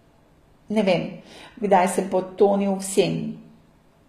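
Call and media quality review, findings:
HE-AAC compression throughout: plainly gritty s sounds, treble faked by copying lower bands upward, nothing above 14.9 kHz. Likely a low-bitrate encode, fits about 20 kbps.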